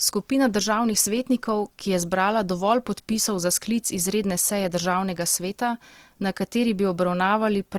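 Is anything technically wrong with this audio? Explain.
Yes. Throughout the speech there is plainly audible damage, most likely from Opus compression at a low rate. The sound points to the music-oriented CELT mode at roughly 24 kbps, keeping full bandwidth. With too few bits, the encoder preserves each band's energy but fills the fine detail with folded or noise-like content. Voiced sounds therefore come out grainy and rough rather than swirly. On a spectrogram, harmonics smear into noisy bands reaching the top of the range, with few holes. The waveform shows no clipping or dropouts.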